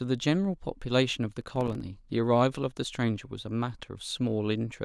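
From 1.41 to 1.81 s the processor falls behind and misses a run of buffer deadlines, a processor overload crackle. Each miss drops in a hard-edged slice of silence, pointing to buffers of a few milliseconds, so the speech breaks into gritty crackle until the load eases.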